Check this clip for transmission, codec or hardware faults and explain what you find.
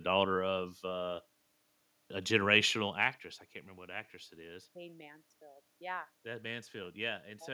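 No transmission, codec or hardware faults are evident.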